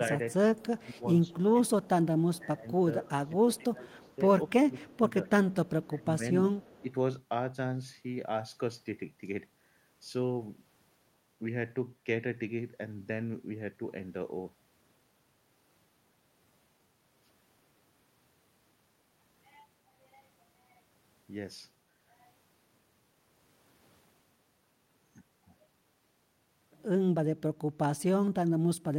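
Speech on a call, with two kinds of fault. An echo leak appears at 0.57–0.9 s, 3.98–4.16 s, 5.51–5.86 s and 6.55–6.83 s. It is a faint copy of the sound 221 ms late, about 30 to 35 dB down, likely from a loudspeaker echo the far end failed to cancel. The talker's level also dips by roughly 10 to 20 dB at 0.63–1.89 s, 2.39–5.27 s, 5.86–6.22 s and 6.82–6.88 s. This is speech suppressed in double talk, likely the echo canceller ducking both sides while they overlap.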